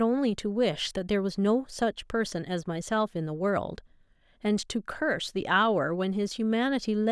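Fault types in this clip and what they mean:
No faults are present anywhere in the recording.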